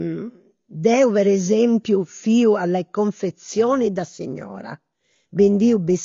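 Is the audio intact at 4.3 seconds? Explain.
No. At 4.3 s, periodic clock jitter is present, running from 3.48 s to the end. A steady wobble of around 300 Hz shakes the converter's timing. Each component gains sidebands that far above and below it. The result is a rough, metallic edge on the speech.

The same moment is also dull and smeared. Nothing is heard above 6.9 kHz, and codec damage is plainly audible. The likely cause is AAC compression, which fits AAC-LC at a low bitrate around 24 kbps. It thins the spectrum and adds a fizzy, warbling texture to sibilants.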